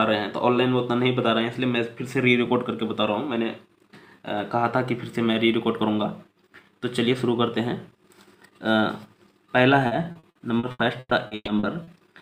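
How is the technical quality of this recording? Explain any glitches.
The recording has one clear problem near the end. From 9.87 to 11.90 s there is repeated packet loss, giving a robotic sound. Around a dozen short holes appear in quick succession, the longest about 120 ms. Each hole is papered over by stretching the last bit of sound forward, so about a third of that span is synthetic fill. The result is choppy and robotic, with pieces of the audio missing.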